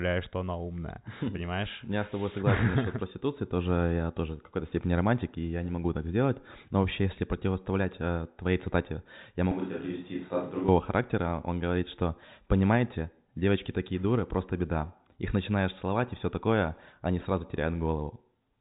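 From 9.51 to 10.68 s, right after "э твоей цитате я", the speech turns hollow and roomy, about 5 dB quieter with more background noise, likely a switch to a distant microphone.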